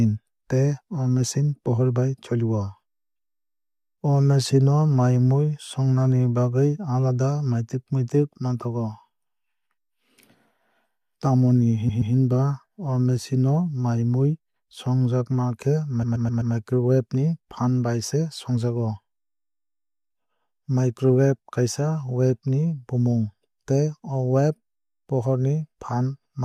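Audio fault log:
11.88–12.14 s and 16.02–16.53 s, repeated frames: a 128 ms block of compressed audio is played again, twice more at the first point (adding 256 ms) and four times more at the second (adding 512 ms), which fits a short run of about six frames being re-sent. The result is a rhythmic stutter. On the waveform the same 128 ms shape appears side by side. The spectrogram shows identical copied slices.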